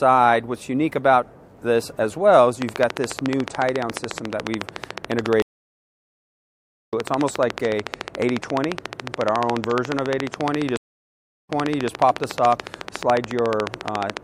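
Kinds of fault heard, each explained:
Train of clicks: The likely cause is interference or a faltering interface injecting a short pulse at a steady rate, here about 14 times per second. From 2.62 s to 14.18 s a regular ticking sits over the sound, roughly 150 clicks of near-identical shape, peaking well above the level of the audio itself. The ticking continues straight through the silent gaps.
Stream reconnect: The connection dropped, the player stalled, then reconnected and restarted decoding mid-stream. At 5.42 s the audio cuts to silence for 1.48 s and resumes about a second further on, so that stretch of material is skipped. At 10.77 s a 0.70 s silence ends with playback picking up 418 ms earlier than where it stopped, so a short stretch is heard twice.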